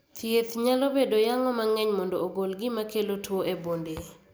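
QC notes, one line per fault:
No faults detected.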